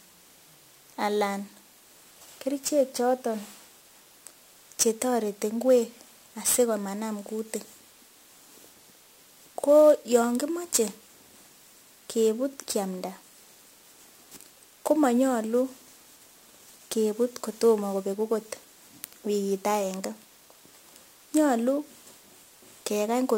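A speech recording with sample clock jitter throughout: an unstable converter clock of roughly ten microseconds adds hiss-like roughness, about 20 dB below the voice, strongest on loud, bright sounds and absent in pauses.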